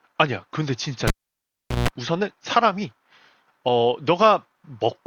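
At 1.08 s a pop leaves near silence for 0.76 s: a cable pulled and plugged in while live. A 155 ms burst of 60 Hz mains buzz as the tip touches, then a second pop at 1.88 s, sets it apart from a plain dropout.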